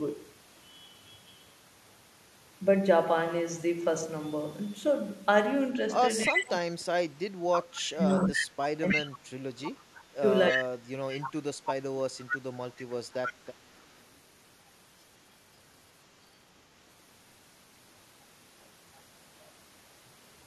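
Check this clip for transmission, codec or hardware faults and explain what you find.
Two faults are audible, both tied to echo control on a speakerphone link.

Echo leak appears at 6.24 to 6.5 s, 7.53 to 11.3 s and 12.22 to 14.04 s. A copy of the speech returns about 316 ms late, first about as loud as the original, later about 5 dB below it. The likely cause is an echo canceller on the far side leaving loudspeaker pickup in its outgoing signal.

Speech suppressed in double talk runs from 6.28 to 12.17 s, overlapping the echo. Where both sides are active, the speech is turned down for roughly 4 s in total, with the deepest dips near 30 dB. The likely cause is the canceller attenuating everything when it cannot separate the talker from the echo.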